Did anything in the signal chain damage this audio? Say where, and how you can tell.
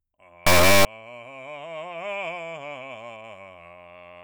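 Yes. At the sample-format conversion stage, 32-bit integer samples were read as 32-bit float, an integer read as float fault, from 0.47 to 0.85 s. The misread values swing between near-zero and far past full scale, so the music becomes an extremely loud, buzzing square-like wave.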